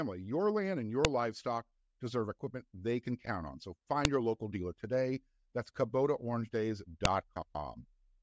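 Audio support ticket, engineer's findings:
Sharp snaps at 1.05 s (after "your land and"), 4.05 s (before "your local dealer today"), 7.05 s. File header played as audio: 3 s WAV chunks joined with headers intact, header bytes decoded as samples.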